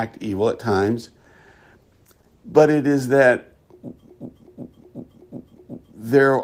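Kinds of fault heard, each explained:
Call bitrate drop: encoder starved of bits after "evil at", roughly 32 to 14 kbps; spectrogram shows high frequencies vanishing, sound turns coarse and muffled until about 2.85 s.
System hang loop: after "is that", a frozen buffer replays a 372 ms chunk five times, a 2.7 Hz stutter; waveform shows identical repeated blocks from 4.09 to 5.94 s.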